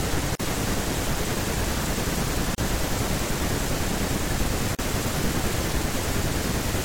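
Separately encoded pieces of this speech were joined without trimming the encoder's start-up delay and final-frame padding, so each join leaves a gap at a join of encoded pieces. Three short silences cut into the speech: 0.35 to 0.40 s (44 ms), 2.55 to 2.58 s (32 ms), and 4.75 to 4.79 s (38 ms). Each opens and closes with its edges smeared by the codec, and the speech resumes exactly where it broke off.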